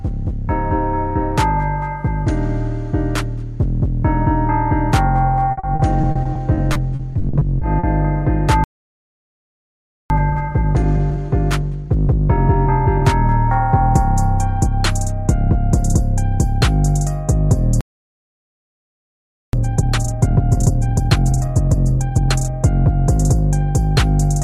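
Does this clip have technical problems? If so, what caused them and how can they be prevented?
Yes. The clip has three kinds of fault.

Repeated packet loss (robotic sound) runs from 5.51 to 7.85 s. Audio data kept going missing over this stretch. Each hole was patched by stretching out the last bit of sound, and about 16 holes follow one another closely. The longest lasts 60 ms. Together they fill about 480 ms, roughly a fifth of the stretch. The result is choppy, with pieces missing. A larger jitter buffer and forward error correction would prevent this.

A playback stall occurs twice. The audio goes silent mid-flow from 8.64 to 10.10 s, about 1.46 s, and again from 17.81 to 19.53 s, about 1.73 s. It then resumes. The likely cause is that the player ran out of buffered data or its playback thread was blocked, so nothing reached the output until it recovered. Keeping more data buffered and giving the audio thread priority would prevent it.

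Time-compressed catch-up follows each stall. From 10.10 to 13.10 s the audio plays at 1.15 times normal speed. From 19.53 to 22.53 s it plays at 1.5 times. The player is trimming its backlog by cutting out small pieces and cross-fading the joins. The pitch stays normal, but the sound is hurried. Preventing the stalls removes the need for it, and a gentler catch-up rate makes it less noticeable.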